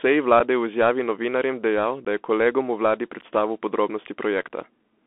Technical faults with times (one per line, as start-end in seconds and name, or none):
0.00-5.07 Bluetooth CVSD headset codec
0.39 unconcealed Bluetooth headset packet loss
2.05 unconcealed Bluetooth headset packet loss